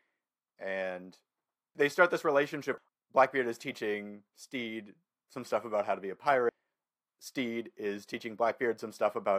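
At 6.49 s the speech skips abruptly, with roughly a third of a second missing. This is likely audio missing between chunks: a gap at a 4-second chunk boundary.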